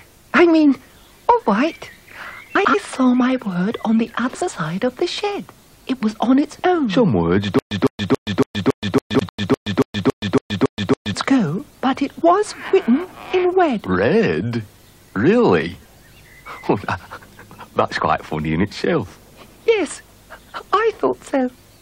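At 2.55–2.75 s, 4.34–4.49 s and 9.14–9.29 s, frames out of order swap adjacent blocks of about 93 ms, then 70 ms twice, producing a garbled flutter. From 7.59 to 11.14 s, a stutter with silent gaps repeats a 155 ms burst 13 times, each followed by 124 ms of digital silence, likely from a stalled stream retrying.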